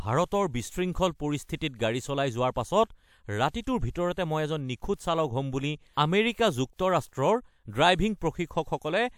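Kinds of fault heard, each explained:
Pre-echo: a transform codec spreads quantisation noise across each block, so noise meant for a loud attack leaks into the quiet just before it. Here a short hiss of about 58 ms and 43 ms precedes two attacks near 1.43 s and 1.57 s, softening their onsets.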